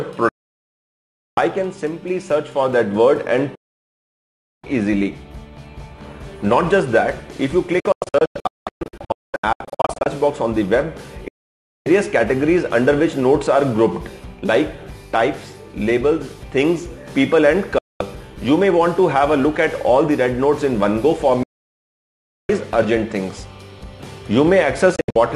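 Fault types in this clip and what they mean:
Digital broadcast dropout: seven abrupt mutes into clean silence, lasting from about 0.14 s to over 1 s, some broken into short holes, with no hiss or static as analogue fading would bring.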